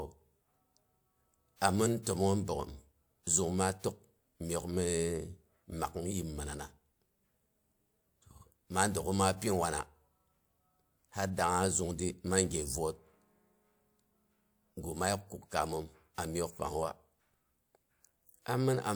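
At 1.56 to 1.62 s and again at 2.03 to 2.07 s the speech shows pre-echo: a short hiss leads each sharp onset by about 52 ms and 34 ms. The codec spread quantisation noise across a transform block, so noise meant for the loud attack leaked into the quiet moment just before it, softening the onset. Unlike reverb or an echo, the smear arrives ahead of the sound, not after it.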